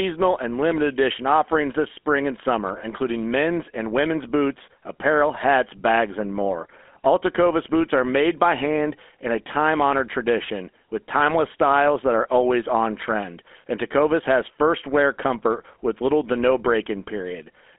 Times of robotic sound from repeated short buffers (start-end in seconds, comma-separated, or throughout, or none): none